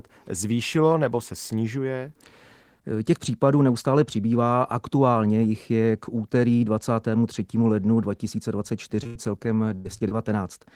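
At 9.03 s a short concealed packet loss extends the last sound for 13 ms, then at 9.07 to 9.17 s a burst of packet loss carries the last sound on and fades it across about 80 ms of missing speech, showing as a shrinking waveform. Another burst at 9.75 to 9.87 s repeats this over 100 ms. Short losses at 9.99 to 10.02 s and 10.09 to 10.13 s leave brief smears or wobbles.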